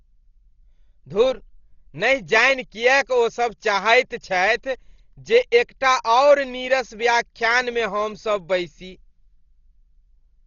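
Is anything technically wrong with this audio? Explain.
Yes. The speech is heavily damaged throughout, and the likely cause is Dolby Digital compression at a very low bitrate. The damage fits an AC-3 style encoder running at about 32 kbps. Nothing is left above 7 kHz, so the sound is dull and muffled. Starved of bits, the encoder codes many frequency lines with no detail. The decoder fills those gaps with noise. This gives a rough, fluttering grain around the voiced sounds.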